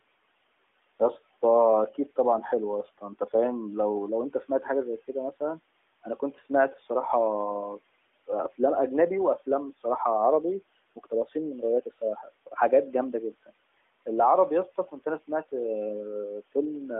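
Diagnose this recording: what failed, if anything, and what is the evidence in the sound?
Call processing shows speech cut by the noise suppressor at 2.84–3.33, 6.04–6.77, 10.96–12.58 and 14.76–15.53 s. Speech drops by about 11–19 dB. The suppressor mistook quiet speech for noise.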